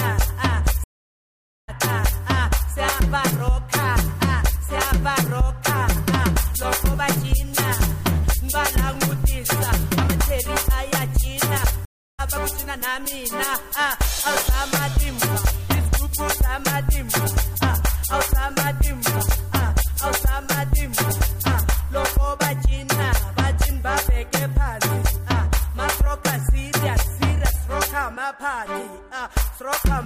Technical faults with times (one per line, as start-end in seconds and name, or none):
0.84-1.70 stream reconnect
11.85-12.21 stream reconnect